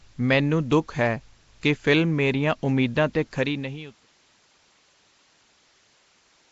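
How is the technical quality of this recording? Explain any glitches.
The recording has plainly audible codec damage throughout. Everything is hissy and smeared, with a hard ceiling at 7.7 kHz, and the likely cause is Nellymoser compression at a low bitrate, around 32 kbps. Coarse fixed bit allocation drops weak bands and fills them with noise, giving a rough, underwater halo. On a spectrogram, energy stops flat at 7.7 kHz, with speckled noise patches between harmonics. The deliberate fade-out from around 3 s to 4.12 s appears on the waveform as a smooth, click-free taper.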